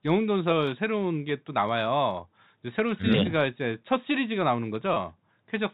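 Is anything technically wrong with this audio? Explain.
Yes. At 4.94 to 4.96 s there is packet loss with pitch repetition. About 20 ms went missing, which fits a single lost packet. The receiver repeated the last pitch period, so the gap sounds like a brief held, buzzy note. The G.711 telephone coding keeps everything under 4 kHz.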